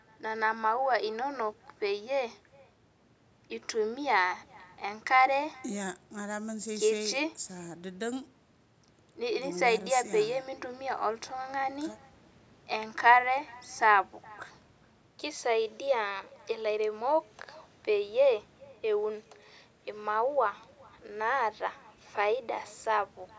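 Throughout, an echo with no canceller returns the speech roughly 0.4 s later, about 28 dB quieter; a spectrogram shows faint delayed copies trailing every syllable.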